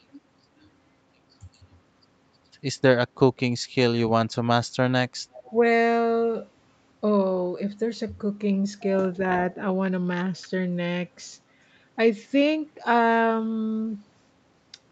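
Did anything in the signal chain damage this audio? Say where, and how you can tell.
Yes. From 5.33 to 5.51 s a faint, delayed copy of the speech sits underneath, trailing it by about 371 ms and roughly 25 dB down. That is an echo leak at the call-processing stage, likely a far-end loudspeaker echo that its canceller didn't fully remove before sending it back.

Right after, between 5.5 and 5.62 s, the speech briefly dips by around 5 dB, for about 70 ms in total. This points to speech suppressed in double talk, likely the echo canceller turning down the near-end talker while the other side's sound was also playing on its loudspeaker.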